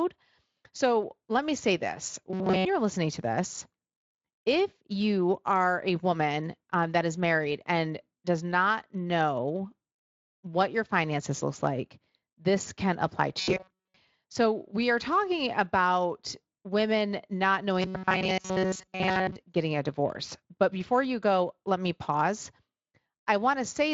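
Speech with three stretches of rigid, metallic buzzing at a fixed 188 Hz: 2.30 to 2.66 s after "let me say this", 13.39 to 13.96 s after "like this can apply", and 17.82 to 19.36 s before "getting a divorce". This is robotic sound from repeated short buffers, likely from audio arriving too seldom, with roughly 5 ms segments looped while most of the real audio is skipped.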